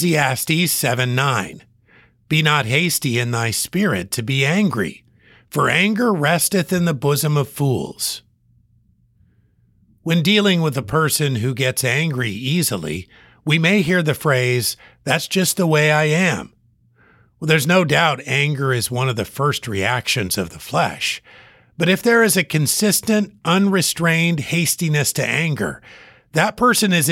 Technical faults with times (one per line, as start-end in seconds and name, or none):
none